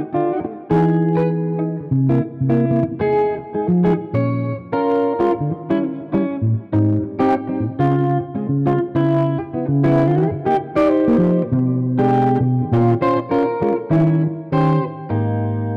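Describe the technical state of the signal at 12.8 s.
At 12.8 s the signal is hard clipping, as it does across the whole clip. It is driven about 5 dB past what the stage can pass. Peaks are cut flat, touching a few percent of samples. Those flat tops add high harmonics, heard as crackle on loud moments.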